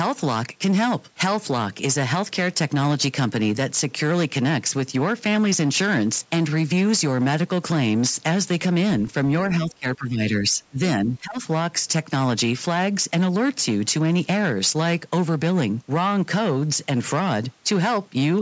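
Speech from a call runs into hard clipping for its whole length. The signal is driven about 10 dB past what the chain can pass, so roughly a tenth of the samples have their peaks sheared flat. Those flat tops spray harmonics upward, giving a harsh fuzz on every loud syllable. Because the roughness follows level, growing on peaks and easing on quieter stretches, it points to overload rather than codec smearing, which tracks spectral detail instead. Nothing sits above the 8 kHz ceiling of the call's microphone path. Two dips, most likely speech suppressed in double talk, occur from 9.66 to 10.78 s and from 11.04 to 11.39 s. The level falls by up to about 20 dB in the first and about 15 dB in the second, affecting well over half a second and under half a second respectively. This fits an echo canceller that cannot separate the near voice from far-end echo and so pulls everything down. Unlike a network dropout, the sound is attenuated rather than replaced by repeated fragments.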